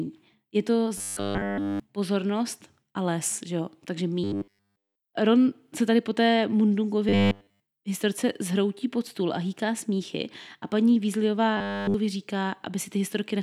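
At 0.98–1.80 s (before "pozornost a les že"), 4.24–4.96 s (after "les že jo takže"), 7.09–7.60 s (before "historce zhroutí pod stůl") and 11.57–11.94 s, the speech becomes a rigid, metallic 100 Hz buzz: robotic sound from repeated short buffers, likely a roughly 10 ms block looped while fresh audio is skipped.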